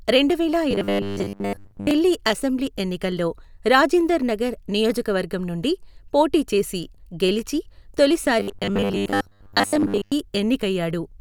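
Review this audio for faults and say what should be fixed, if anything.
Robotic sound from repeated short buffers shows up from 0.71 to 1.91 s and again from 8.40 to 10.13 s. The speech becomes a rigid 100 Hz buzz, likely from most of the audio being replaced by looped 10 ms chunks. Give the playback buffer more headroom so it never runs dry.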